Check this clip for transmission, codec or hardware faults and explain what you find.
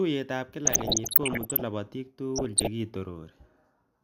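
The speech carries DAB burbling in two bursts, from 0.65 to 1.62 s and again from 2.36 to 2.67 s. Weak reception let bit errors slip past error correction into the MP2 data, corrupting samples and scale factors so individual sub-bands leap in level for up to a frame. The error rate sounds to be around one percent in the first burst and a little lower in the second, which is shorter. Both add burbling over the speech.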